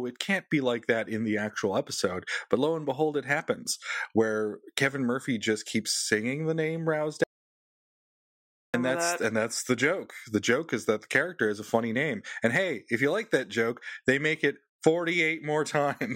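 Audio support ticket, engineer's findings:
Audio dropout to silence, 7.24–8.74 s, after "keeps singing the name", resumes at "that's that". About 1.5 s of silence, no room tone. Likely input loss upstream, recorder writing silence.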